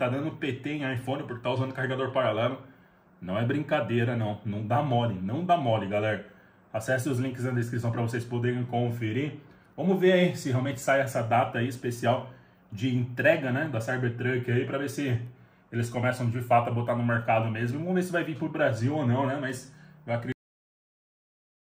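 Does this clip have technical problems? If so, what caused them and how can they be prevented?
Yes. A cut-off end at 20.32 s stops the sound mid-event, dropping straight to digital silence for the final 1.45 s with no natural decay, because the last buffers were never written out. Flushing and closing the recording or encoder cleanly before stopping prevents it.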